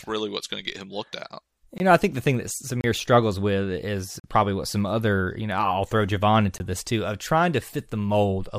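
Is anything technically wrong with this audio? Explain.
Yes, the speech drops out four times. There are blocks of digital silence at 1.78–1.80 s, 2.81–2.84 s, 4.20–4.24 s and 6.58–6.60 s, lasting 20 to 44 ms. The output buffer likely wasn't filled in time, so zeros went out. With no fade, the sound cuts out and back abruptly, and you hear brief holes.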